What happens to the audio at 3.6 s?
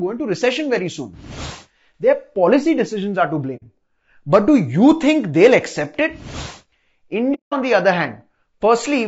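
Around 3.56 to 3.63 s there's AAC frame loss with muting: a short stretch of the decoded spectrum was zeroed out, which fits a couple of lost frames. The overlapping windows fade the sound down and back up, so you hear a soft-edged dropout.

Across that moment, as through the whole clip, the speech carries plainly audible low-delay AAC compression damage, likely AAC-ELD at about 32 kbps. Short frames resolve the pitch harmonics poorly, so the voice sounds rough and grainy, with noise between harmonics and a dulled or synthetic-sounding top end.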